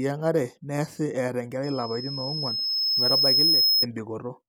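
Loudspeaker feedback squeal runs from 1.63 to 3.86 s. The microphone is picking up its own loudspeaker, and at 5.2 kHz the loop gain exceeds one, so a thin tone swells over about two seconds until it sits a little above the speech.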